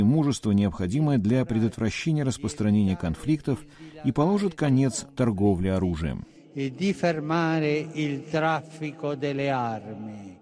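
No technical faults are audible.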